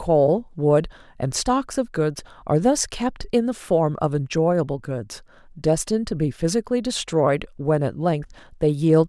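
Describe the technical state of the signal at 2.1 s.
At 2.1 s the speech signal is intact, with no audible fault at that moment.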